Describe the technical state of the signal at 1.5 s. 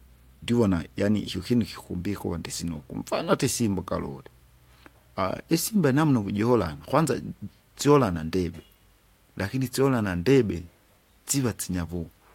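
At 1.5 s the speech signal is intact, with no audible technical fault at that moment.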